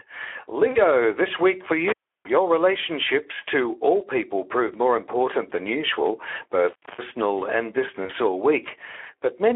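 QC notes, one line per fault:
Throughout: Speex codec. The speech sounds hoarse and grainy, with a noisy texture and a thin, band-limited tone confined to roughly 300 Hz to 3.4 kHz. At 11 kbps this CELP coder has too few bits for the excitation, so the damage is plainly audible.
0.71 to 0.79 s: VoIP packet loss concealed by the speech codec. Just before "this week for" the sound smears into a brief, fading tone or noise and stays weak or distorted as it resumes. About 40 ms was lost, and the decoder extended the last pitch and filter at falling gain.
1.88 to 2.30 s: intermittent contact. Right after "this week for" the sound drops out or breaks up, with crackle at both edges and faint hiss in the gap, before "relationships to all people" returns. A loose plug or cable opened the line for about 330 ms.
8.05 to 8.12 s: VoIP packet loss concealed by the speech codec. A short smear fades in level, then the sound takes a moment to regain full strength. 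About 40 ms of packets went missing, and the decoder bridged the gap by extrapolating its last frame.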